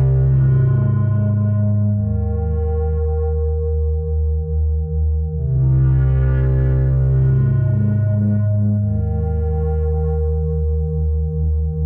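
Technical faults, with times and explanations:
6.38 s to the end, sample clock jitter: from this point the converter's clock timing wanders by roughly a microsecond and a half, so each sample is taken slightly off its proper instant. The resulting error scales with how fast the waveform is changing. It sits at around 55 dB below the signal as a fine hiss and grain that rides on the louder, brighter passages and drops away when the sound goes quiet.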